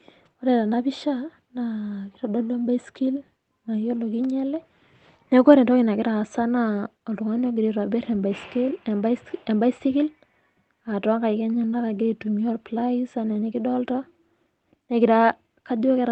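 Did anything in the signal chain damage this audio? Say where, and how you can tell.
No, nothing in the signal chain damaged this speech. What can be heard of the chain is a working call path, with the top end stopping at 8 kHz, which fits a wideband Opus setting at a modest bitrate.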